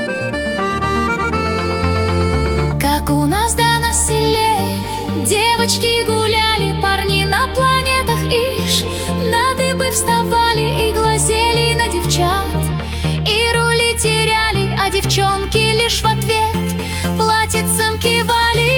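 No technical faults can be heard anywhere in the audio, and the signal holds steady with nothing breaking into it at any point.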